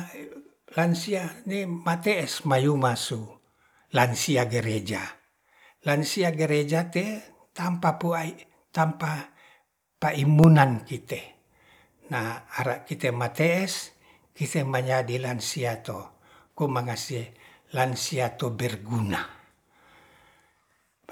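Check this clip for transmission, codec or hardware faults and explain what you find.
One hardware fault is present: periodic USB or driver dropouts. From 8.39 s to 12.48 s, between "gereja tetampa pu ai" and "ara kite mate'es", the speech ticks about five times, every 1.02 s. A background task stalls the audio path. Each time, about a millisecond drops to silence, heard as a small regular click.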